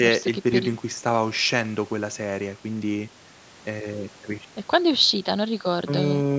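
No technical faults are audible.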